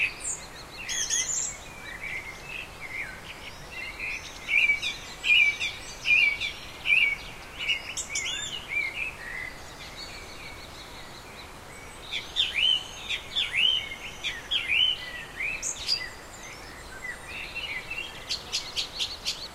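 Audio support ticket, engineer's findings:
Listened to the whole sound recording and found nothing to flag, so no action needed on this one.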